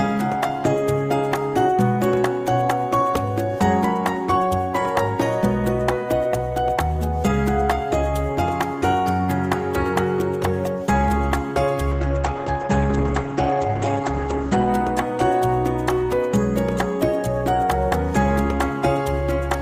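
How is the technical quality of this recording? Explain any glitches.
One glitch: a call bitrate drop from 11.92 to 14.75 s. The encoder was starved of bits, so detail coarsens and the top band narrows from 20 kHz to 8 kHz, a drop that fits a fall from about 32 to 12 kbps. It sounds muffled and watery, and a spectrogram shows a flat ceiling at 8 kHz for nearly 2.8 s.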